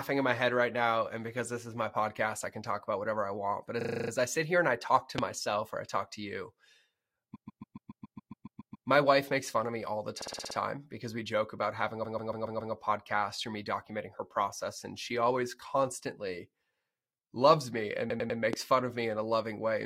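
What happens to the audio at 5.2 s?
A single loud pop hits from 5.18 to 5.21 s, well above the speech. A sudden voltage pulse, likely from a switch or static, causes it.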